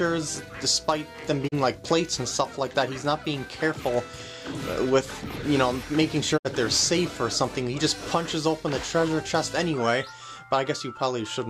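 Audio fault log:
1.47–1.54 s and 6.36–6.47 s, digital broadcast dropout: the receiver briefly mutes with a 20 ms fade, losing about 32 ms, then 64 ms, of sound. That fits one and then two lost frames.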